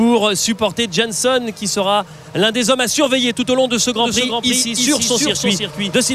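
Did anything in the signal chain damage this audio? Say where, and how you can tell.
Yes. A doubled audio track starts abruptly at 4.00 s and runs to the end: a dry, full-band copy about 5 dB quieter trails the original by roughly 0.3 s. This points to the driver or buffer stage, likely a second, slower capture path mixing the signal in again.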